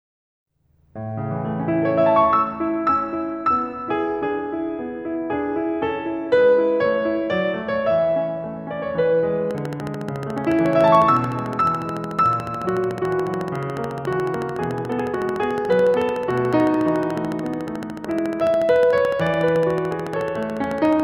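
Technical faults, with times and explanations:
9.51 to 21.01 s: train of clicks. Regular ticking at about 13.8 clicks per second runs over the music, roughly 150 in all, peaking about 5 dB above it, likely from interference or a faulty connection. Waveform shows evenly spaced spikes; spectrogram shows thin vertical broadband lines.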